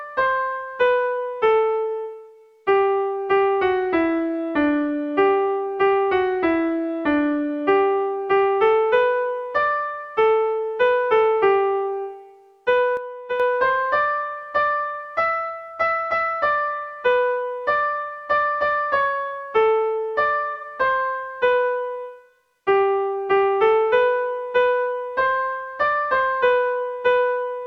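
At 12.97 s the level falls abruptly by about 7 dB and stays down until 13.40 s. This is a sudden gain jump: the step happens between one sample and the next rather than over a ramp, so the background noise drops by the same amount at the same instant. That sets it apart from a compressor or a fade, which would take time to move. The likely cause is a digital gain setting being applied without smoothing.

From 20.54 to 20.65 s there is a brief smeared, grainy patch. This is AAC frame loss with concealment. Roughly 85 ms of coded audio went missing, which fits a couple of lost AAC frames. The decoder covered the gap by reusing the last good spectrum, so you hear a phasey, noisy texture instead of silence. That is what distinguishes it from a plain dropout, which would be a clean gap.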